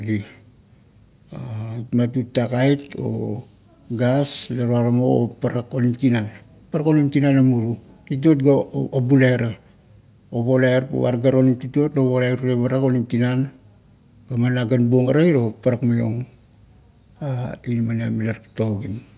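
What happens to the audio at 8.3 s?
Nothing goes wrong at 8.3 s; the speech there is intact, with no dropout, click, distortion or other fault.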